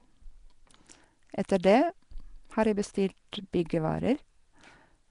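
From start to finish the speech carries a rough, hissy halo and a smeared, underwater quality, with nothing above 10.6 kHz. That's likely Nellymoser compression, Flash's mic codec. It codes short blocks coarsely and fills starved bands with noise, and the grain fits about 44 kbps.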